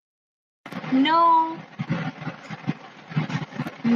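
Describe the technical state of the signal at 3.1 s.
At 3.1 s the speech signal is intact, with no fault present.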